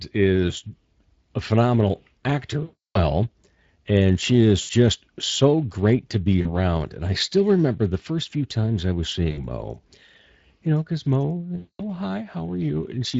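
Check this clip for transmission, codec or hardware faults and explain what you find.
Two faults are present: Speex codec damage throughout the speech, and VoIP packet loss concealed by the speech codec at five points.

Speex codec, throughout: the low-bitrate CELP coding, which fits a rate near 20 kbps, starves the excitation of bits, so the voice sounds hoarse and grainy. On a spectrogram, harmonics look smeared, with a diffuse, noise-like fill in the upper band.

VoIP packet loss concealed by the speech codec, at 2.63–3.00 s (320 ms), 4.61–4.71 s between "and she is" and "so great to be", 6.41–6.47 s after "so great to be", 9.31–9.47 s after "few times I was", and 11.57–11.82 s: the decoder extends its last pitch and filter, so the sound becomes a fading buzzy tone or coloured noise. On the waveform this shows as a repetitive, decaying stretch.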